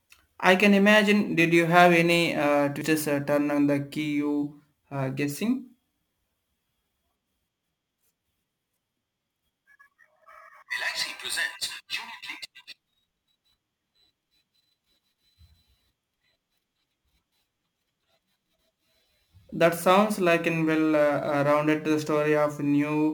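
Throughout the speech there is crude rate conversion, which points to a 44.1 kHz to 48 kHz change made by repeating the nearest samples with no filtering. The periodic error, roughly 25 dB below the speech, adds a gritty, inharmonic fizz that follows loud, bright syllables.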